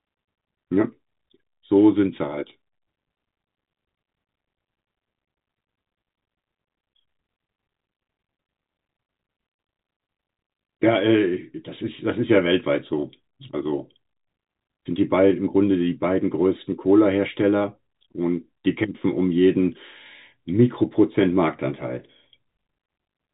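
Speech with no technical faults to report.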